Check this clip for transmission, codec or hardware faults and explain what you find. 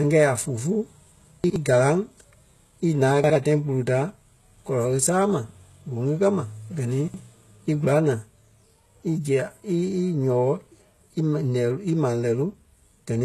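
Two faults are audible in this speech: codec damage across the whole clip, and three short jumbled moments.

Throughout, the treble sounds synthetic. Nothing is present above about 12.3 kHz. The likely cause is HE-AAC compression at a very low bitrate, which fits around 16 kbps. HE-AAC codes only the lower spectrum. It then rebuilds the highs by copying lower bands upward and shaping them roughly. That rebuilt treble is not genuine. Its harmonics do not match those below. So s sounds come out gritty and metallic.

There are chunks out of order at 1.44 to 1.56 s, 3.24 to 3.36 s, and 7.08 to 7.20 s. Each spans two 60 ms chunks. In each, one chunk plays one slot late, after the chunk that should follow it. No audio is missing. The sequence is simply swapped. This creates three hard joins where unrelated waveforms meet. Each spot is heard as a brief garbled stumble.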